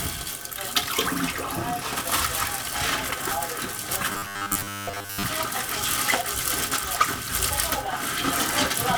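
From 4.12 to 5.23 s the sound turns to a rigid robotic buzz near 100 Hz. Repeated short buffers, likely about 10 ms long, probably replace most of it.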